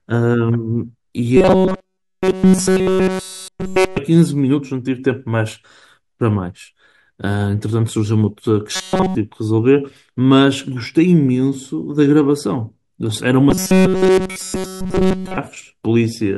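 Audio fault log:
1.37–3.98 s, 8.76–9.15 s and 13.50–15.37 s, robotic sound from repeated short buffers: fresh audio likely stopped arriving in time, so playback looped a roughly 5 ms buffer almost continuously. That imposes a fixed 188 Hz buzz, turning the speech into a rigid, metallic drone.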